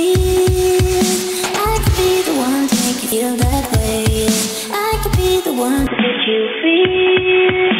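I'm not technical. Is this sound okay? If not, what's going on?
No. At 3.12 s there is a brief glitch. That is damaged data in a compressed stream: the player misread a broken bit of the file.

From 5.87 s to the end, the sound turns dull and boxy, with nothing above 3.5 kHz and a faint new background hiss. It happens without a gap or a change in loudness. The likely cause is the input switched to a poorer device, such as another microphone.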